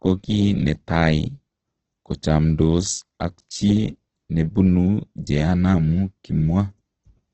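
Throughout, the speech sounds rough and grainy and stops at 8.3 kHz, likely from heavy Opus compression at a very low bitrate near 12 kbps: noise-filled bands, not MP3-style swirling.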